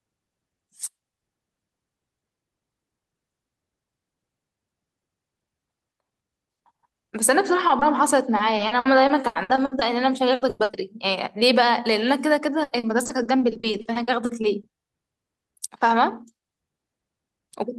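At 7.67 s and again at 7.79 s there are two instances of short concealed packet loss. Each lasts 40 ms, and about 20 ms of sound in each failed to arrive in time. The receiver covered each hole by extending the sound just before it, then blended back into the real signal. The result is two quick smears or wobbles, close together, that blur the speech at that point.

From 8.37 s to 9.83 s, repeated packet loss (robotic sound) begins. About ten short gaps hit this stretch. The longest is 80 ms, and about 400 ms in total is patched, roughly a quarter of the span. A tighter burst follows from 10.35 s to 10.75 s. There, four gaps of up to 100 ms fill about 60% of the time. From 12.63 s to 14.65 s, eighteen gaps cover about a quarter of the span. Each hole is bridged by prolonging the previous sound before the next loss arrives. The speech turns choppy, with pieces dropping out.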